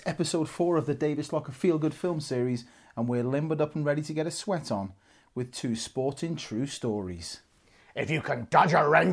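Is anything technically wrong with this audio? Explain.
No, nothing technically wrong stood out on listening to this speech recording.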